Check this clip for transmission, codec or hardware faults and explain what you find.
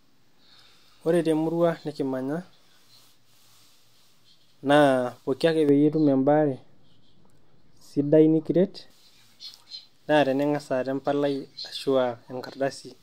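There's one fault worth flagging, a stretch of wrongly applied de-emphasis. Right after "pooki ake", from about 5.69 to 8.90 s, the speech suddenly goes dull and muffled. A treble-cut filter meant to reverse pre-emphasis has been run on audio that never had any, or run a second time, so the top end tilts away smoothly. By 10 kHz it's down about 11 dB relative to 1 kHz, which is why everything sounds like it's behind a blanket.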